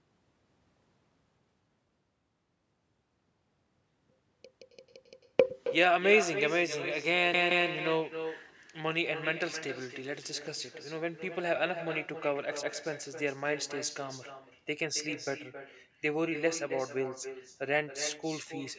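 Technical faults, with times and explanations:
Throughout, echo with no canceller: the far end's loudspeaker leaks into its microphone unremoved, so speech returns roughly 300 ms later, about 9 dB quieter and thinner.
4.61–5.29 s, 7.34–7.68 s, 12.63–12.80 s, repeated buffer: late audio made the device replay its last 171 ms chunk four, two, then one extra time, causing hard-joined stutters.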